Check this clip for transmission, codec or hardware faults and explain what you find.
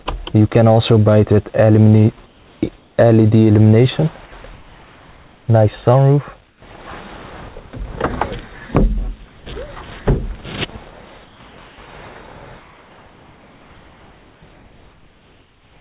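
The clip shows three kinds of discontinuous-transmission fault, all likely caused by the sender's voice detector. The band stops at 4 kHz throughout, which fits a narrowband telephone codec such as G.711.

Comfort noise in place of the background occurs at 2.26 to 2.98 s, 6.48 to 6.62 s and 11.26 to 11.78 s. Here the sender falls silent and the receiver substitutes synthetic noise. At 6.5 s the background sits about 35 dB below the loud passages, and the noise is about 8 dB quieter than that real background. On a spectrogram it appears as smooth, featureless texture, and on a waveform as a steady band.

Sound chopped by the voice detector runs from 4.26 to 5.48 s. The detector toggles repeatedly, and about 1.02 s of material is replaced. The sound is choppy. A spectrogram shows alternating detailed and blank-textured patches, and the waveform shows abrupt envelope steps.

Sound dropped by the voice detector occurs at 9.26 to 9.46 s. 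The detector mistook quiet sound for background, so about 90 ms of real sound is lost under 200 ms of comfort noise. On a spectrogram the detail simply cuts to flat noise, and the waveform amplitude drops suddenly.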